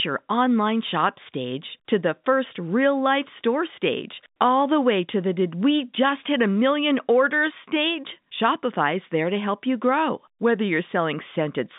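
Speech over a telephone line; no technical faults heard.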